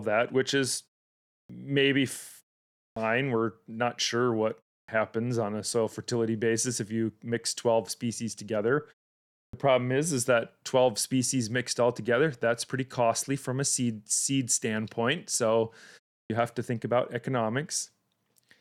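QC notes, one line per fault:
1.45, 2.92, 4.84, 9.49 and 16.26 s: clipped start after a pause. After silences of 0.3 to 0.65 s, the first 40 to 44 ms of speech are missing, so onsets begin abruptly while the output device wakes.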